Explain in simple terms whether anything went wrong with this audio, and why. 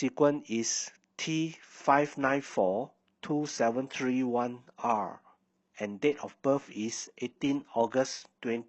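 Something did go wrong, starting at about 1.88 s. The speech suddenly turns rougher, with more compression artefacts, staying that way to the end. That is an adaptive stream at a lower bitrate: the connection slowed, so playback switched to a smaller, rougher version without any gap.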